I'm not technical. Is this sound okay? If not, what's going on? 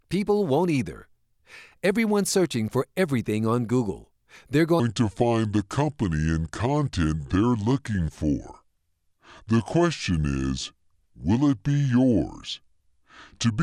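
No. From 4.80 s to the end, there's a section at the wrong speed. The speech plays at about 0.71 times its normal speed. So it sounds slower and deeper, roughly seven semitones lower. This was likely caused by playback on the wrong clock.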